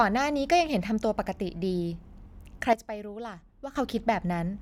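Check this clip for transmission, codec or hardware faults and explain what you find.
One fault stands out, a sudden gain jump in the middle of the speech. At 2.73 s the level drops by about 12 dB in a single step. It stays down until 3.76 s, then returns. The background noise falls and rises with the speech, so the whole signal was scaled. The likely cause is a digital gain change applied instantly, with no ramp, such as a setting switch or a bit shift. It sounds like the speech and the background noise abruptly drop in level together and then come back.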